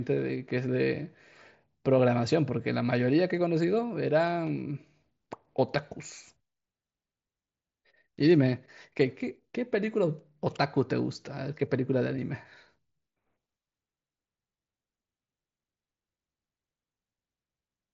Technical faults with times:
none

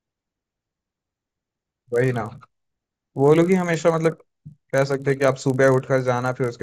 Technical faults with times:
0.00-6.62 resampler restarted on every block

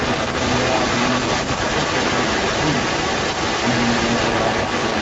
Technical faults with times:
0.00-5.02 echo leak

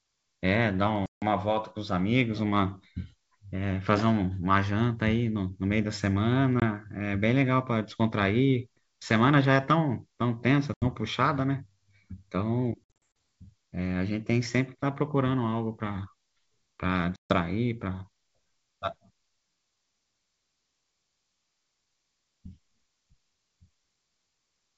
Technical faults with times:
1.06-1.24 packet loss on an ADPCM call
6.60-6.63 packet loss on an ADPCM call
10.74-10.85 packet loss on an ADPCM call
12.84-13.06 packet loss on an ADPCM call
17.16-17.32 packet loss on an ADPCM call

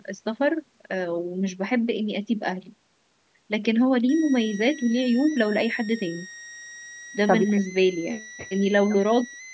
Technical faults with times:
4.09-9.53 switching supply whistle

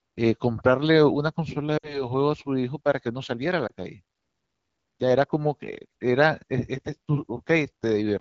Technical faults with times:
1.77-2.05 lost AMR speech frames
3.68-3.72 lost AMR speech frames

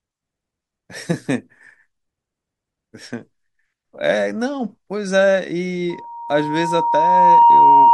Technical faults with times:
5.89-7.94 loudspeaker feedback squeal

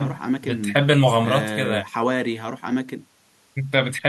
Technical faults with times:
none

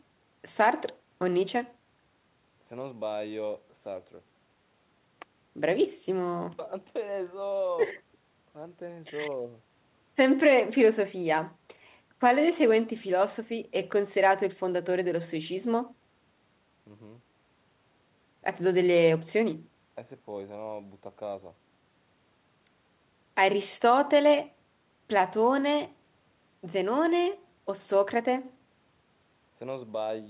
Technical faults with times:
none

